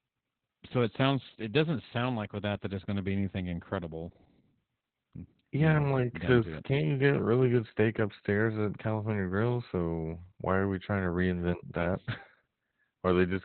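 From start to finish the speech carries Opus voice compression, and it's working hard. Nothing gets through above about 4.3 kHz, so the codec has dropped to narrowband and the top end of the speech is simply gone, leaving it muffled and boxy. The excitation is coded so coarsely that the voice turns hoarse and a bit robotic, which fits a bitrate down around 8 kbps in SILK mode.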